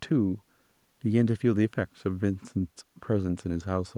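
Nothing in the speech stood out as a technical fault on listening.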